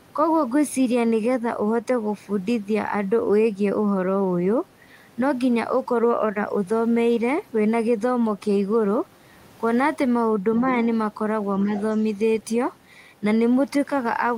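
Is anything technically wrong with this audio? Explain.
Yes, there are two related faults. Other side's voice leaking through, at 10.70 to 10.74 s and 11.61 to 11.82 s: the echo canceller likely failed to fully remove the far end's loudspeaker playback from the microphone, so brief scraps of a second voice come through, around 20 dB and then 15 dB below the main speech.

Speech suppressed in double talk, at 11.64 to 11.73 s: with both sides talking at once, the canceller likely could not separate the local talker from the echo and turned everything down. The main voice dips by roughly 5 dB for about a tenth of a second.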